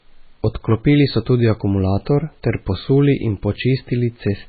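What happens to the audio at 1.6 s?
At 1.6 s the speech sounds watery and swirly, with smeared consonant attacks and nothing above about 4.6 kHz, a fault present across the whole clip. The likely cause is heavy MP3 compression, consistent with a very low bitrate near 16 kbps: the encoder cuts the treble and lets weak frequency lines flicker between frames.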